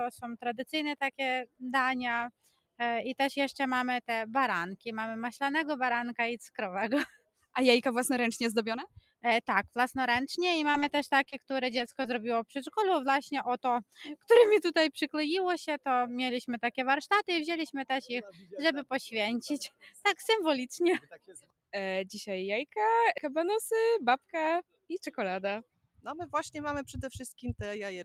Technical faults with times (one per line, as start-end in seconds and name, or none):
0.00-28.05 noise suppressor applied to music or sounds
1.45-1.63 sound cut by the noise suppressor
2.31-2.80 sound cut by the noise suppressor
7.10-7.55 sound cut by the noise suppressor
8.87-9.24 sound cut by the noise suppressor
10.71-12.06 repeated packet loss (robotic sound)
18.32-18.53 sound cut by the noise suppressor
19.70-20.00 sound cut by the noise suppressor
21.01-21.74 sound cut by the noise suppressor
25.64-26.06 sound cut by the noise suppressor